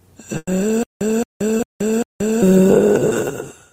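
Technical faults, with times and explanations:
0.37 to 0.49 s, burst of packet loss: a run of packets didn't make it in time, leaving the receiver a hole of roughly a tenth of a second to cover. It kept the last sound going and turned it down as it went, and the last 30 ms or so drop to silence before the audio picks up again. About 100 ms of the real material is simply gone, so things jump forward slightly when it resumes.
0.83 to 2.42 s, stutter with silent gaps: the same 220 ms fragment comes back 4 times at a steady beat of about 0.4 s, each followed by roughly 178 ms of dead silence. That even retry pattern, with the stream running dry between repeats, points to a stalled player or stream as the likely cause. Whatever should have played across this stretch never arrives, so it's a loop rather than a delay.
1.57 to 1.61 s, short concealed packet loss: about 20 ms never reached the decoder in time, and the receiver bridged it by extending the previous sound, as a pitched continuation if that sound was voiced or as shaped noise if not, before blending back into the real signal. 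What you get is a quick smear or wobble, and the 20 ms of original audio it replaced is lost. It lands inside the stuttering stretch.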